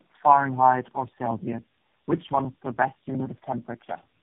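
Speech suffers tandem speech coding throughout: three successive speech codecs leave it rough, muffled and warbly, and a spectrogram shows smeared harmonics with nothing above 3.7 kHz.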